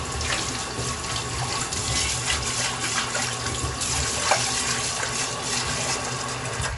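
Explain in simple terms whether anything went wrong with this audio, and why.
Something did go wrong, across the whole clip from start to finish: the sound carries plainly audible MP3 compression damage, most likely from being squeezed into too few bits. The encoder threw away everything above roughly 11 kHz, so the treble stops abruptly, and it dropped quieter details, leaving a watery, swirling texture. That swirling is what tells it apart from a simple muffled recording, which would lose treble but stay smooth.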